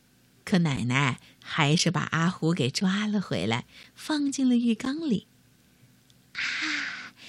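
Periodic USB or driver dropouts run from 0.76 s to 4.86 s: about five brief gaps, each roughly 10 ms of speech replaced by silence, recurring every 1.024 s. Something blocking the audio driver at a fixed interval causes evenly spaced ticks within the speech.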